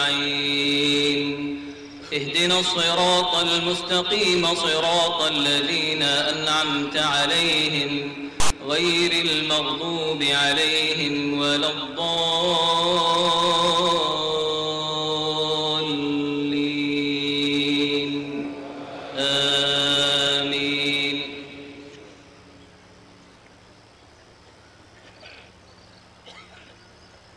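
A block of text tags in the file was read as if it were audio samples, so from 8.40 to 8.50 s the clip breaks into a loud, hard-edged rasp of static, lopsided toward one side, lasting about a tenth of a second before the sound resumes.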